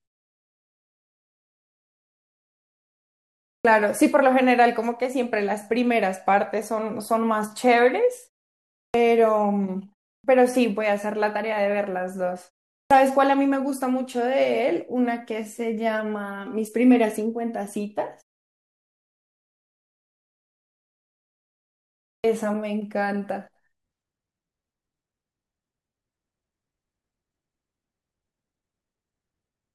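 At 3.6, 8.89, 10.19, 12.86 and 22.19 s the speech resumes with a clipped start after a pause: roughly 50 ms of each onset is missing, so the first sound snaps in abruptly from silence. The output path is dropping into an idle state during pauses of 0.33 to 4.05 s and taking that long to wake. Unlike muted pauses, which only silence the gaps, real speech is lost here.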